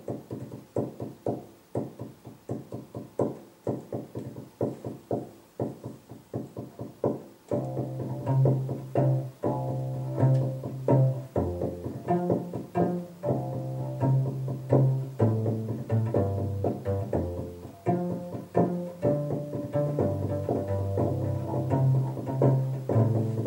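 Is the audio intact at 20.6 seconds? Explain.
No. At 20.6 seconds the sound carries a doubled audio track, which begins abruptly at 19.76 s and runs to the end of the clip. A second full-band copy trails the original by about half a second, some 5 dB quieter, most likely because the same signal was captured again through a slower path. Unlike an echo or reverb, the copy has no decay and no room colouring, and it does not fade in.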